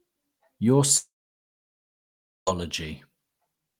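A long network dropout, likely lost stream packets, removes speech from 0.97 to 2.49 s: a short fading buzz, then about 1.4 s of silence.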